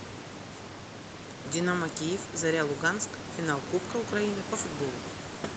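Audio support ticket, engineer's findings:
No faults found in this clip.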